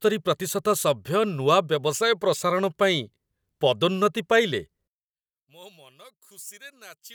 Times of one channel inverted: 4.88-7.14

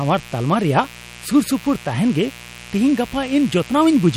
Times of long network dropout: none

